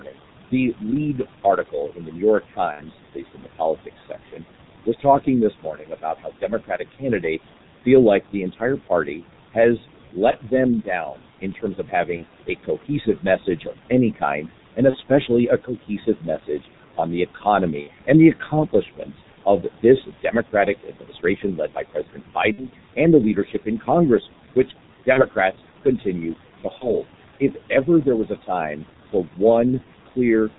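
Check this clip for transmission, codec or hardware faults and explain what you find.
Four faults are audible, two of them present for the whole clip.

Noise suppressor artifacts run throughout. The suppressor pulls down bands it judges to be steady noise, by up to about 12 dB, frame by frame. The room noise, which sits about 19 dB below the speech, therefore dips between phrases and swells beneath them.

The G.723.1 codec, at 6.3 kbit/s with heavy coding damage, is also present throughout. It discards everything above 4 kHz, and its slowly updated voice model smears transitions. The speech sounds muffled and hoarse, and consonants blur together.

Speech cut by the noise suppressor is scattered between 0.0 and 30.17 s and adds up to roughly 3 seconds. In these moments the suppressor misreads quiet speech as noise and attenuates it by as much as about 12 dB. Soft consonants and word endings come across swallowed or faint.

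VoIP packet loss concealed by the speech codec occurs eight times, at 2.72, 10.31, 12.17, 14.90, 17.81, 22.52, 25.13 and 26.78 s. Each gap lasts 30 to 60 ms, which fits one or two lost 30 ms frames. The decoder fills each gap by extrapolating the last pitch and spectral envelope while fading the gain, which produces a brief buzzy, coloured tone. Because each frame depends on the previous one, the speech stays weak or distorted for a short stretch after every gap.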